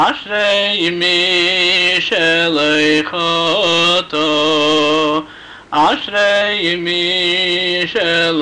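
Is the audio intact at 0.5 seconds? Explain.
Yes, at 0.5 seconds the audio is intact, with no dropout, click, distortion or other fault at that point.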